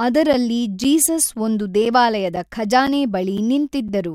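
A speech clip with a regular gap between chunks. Short silent holes with hard edges appear at 0.33, 0.84, 1.35, 1.85, 2.36, 2.87, 3.37 and 3.88 s. The first two fall just before "ಜೀಸಸ್ ಒಂದು", and the one at 1.85 s comes just after it. Each hole lasts about 7 ms and recurs every half second. The audio seems to arrive in 0.5 s chunks with a brief stretch of silence inserted at each join.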